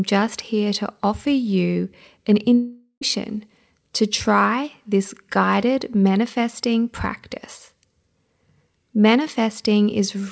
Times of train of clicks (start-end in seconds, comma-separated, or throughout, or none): none